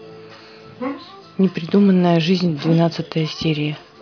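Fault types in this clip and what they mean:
No technical faults can be heard in this speech recording; the signal stays steady and intact throughout.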